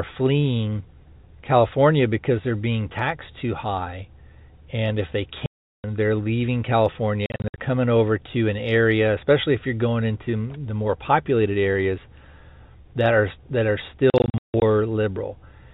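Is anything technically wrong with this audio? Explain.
Yes, there is packet loss filled with silence. At 5.46 to 5.84 s, between "if they" and "they're leaving", 380 ms drops out. Scattered gaps follow at 7.26 to 7.58 s, before "coming over to an", and at 14.1 to 14.62 s, after "that are that are". The receiver inserted silence for missing packets, with hole lengths fitting 20 ms packets. Each hole has hard edges. On the waveform these are flat silent stretches. On the spectrogram they are blank vertical bands, set within the telephone band that G.711 coding leaves below 4 kHz.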